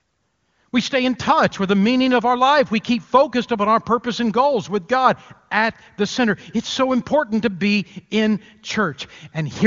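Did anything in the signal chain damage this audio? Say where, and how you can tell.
No, nothing in this speech stood out on listening as damage from any stage of the chain; the wideband HD Voice path shows only its expected top end, with nothing above about 7.2 kHz.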